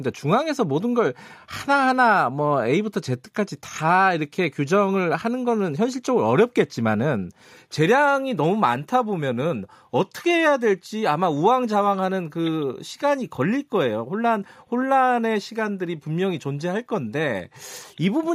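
No technical faults can be heard anywhere in the recording.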